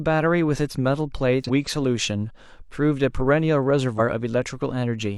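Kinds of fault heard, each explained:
Damaged data in a compressed stream: corrupt bytes throw the decoder off frame sync, giving short glitches at 1.44 s and 3.95 s.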